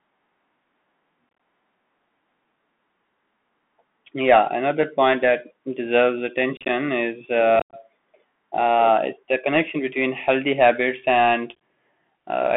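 Speech heard through a Bluetooth CVSD headset codec for its full length. CVSD sends one bit per sample at 64 kbps, each bit saying only up or down with an adapting step size. Here the line band is roughly 200 Hz to 3.4 kHz, so the audio is thin and boxy, with plainly audible codec damage: scratchy sibilants, loud bright sounds that outrun the step and distort, and a granular hiss beneath everything. On a spectrogram the energy stops at a hard ceiling near 3.4 kHz with nothing above it, and a grainy noise floor fills the band between and under the speech. Unconcealed Bluetooth headset packet loss breaks the signal four times, each a burst of lost voice packets replaced by silence or an idle pattern: 1.29 to 1.40 s (67.5 ms missing over 105 ms), 6.57 to 6.70 s (67.5 ms over 120 ms), 7.59 to 7.75 s (120 ms missing, including one 82.5 ms hole), and 11.55 s just after "between healthy habits and". 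The speech drops out in short chopped holes with abrupt edges. The waveform shows flat gaps with sheer sides, and the spectrogram shows thin blank vertical stripes.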